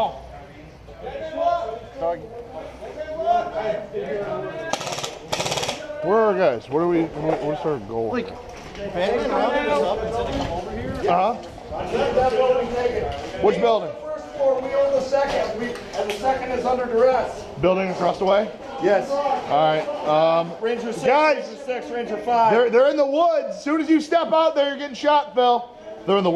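No technical faults are audible.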